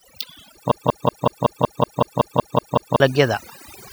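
From the very start the whole speech clip carries overdone noise removal. The denoiser was pushed so hard that any frequency band sitting close to its idea of the noise floor gets pulled right down or switched off, and the quieter parts of the voice are caught in the process. So the background drops and breaks up into little twinkling specks.

Then at 0.71 s it turns into a broken-record loop that runs until 3.00 s. A fragment about 187 ms long plays over and over, back to back, 12 times, with nothing new getting through. What should have been heard across those two-odd seconds is simply gone. The likely cause is a stall in the player, encoder or stream, which kept resending the last piece it had buffered.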